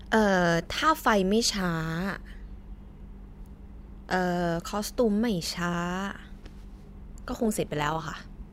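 Speech, with overlap-add ripple from 7.06 s to the end at 8.53 s: the frames were windowed and reassembled with an overlap that fails to sum to a constant gain, so the level swells and dips once per frame, by about 6 dB at a rate of around 200 Hz. It sounds like a metallic buzz with extra tones around the voice. On a waveform the envelope shows a regular comb of bulges; a spectrogram shows fine vertical striping and sidebands spaced about that rate.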